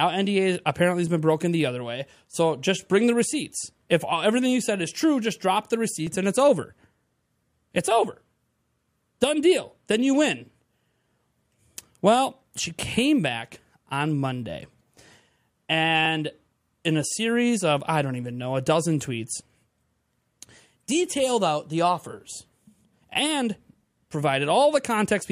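Clicks recur every 5 s from 1.07 s, after "apparently has", to 21.07 s, before "out the offers". These are likely clock drift buffer slips, each dropping or repeating about 30 samples.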